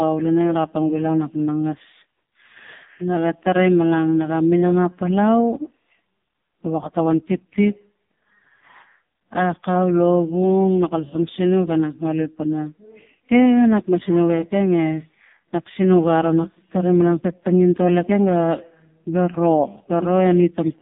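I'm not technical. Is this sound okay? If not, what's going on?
No. Throughout, the speech went through the AMR narrowband mobile codec at a very low setting, cutting everything above 3.7 kHz and leaving the voice muffled, buzzy and robotic.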